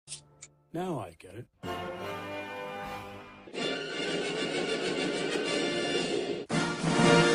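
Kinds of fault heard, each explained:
No technical faults can be heard anywhere in the audio.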